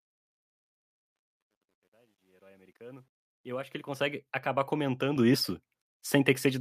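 Speech that fades in over the first 4.15 s, with truncation distortion on that fade from the start to 4.15 s. It is worst up to 3.16 s, where the quiet sound turns gritty. That points to a volume stage keeping only about 10 bits, without dither. At 5.16 s the microphone volume steps up. Voice and background jump together by about 8 dB, because the call software raised the input gain in one step.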